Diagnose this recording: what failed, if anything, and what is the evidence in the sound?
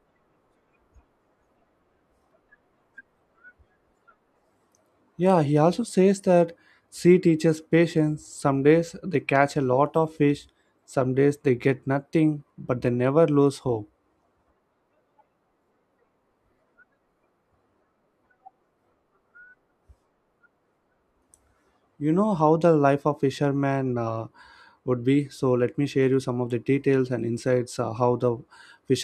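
Nothing failed in this recording.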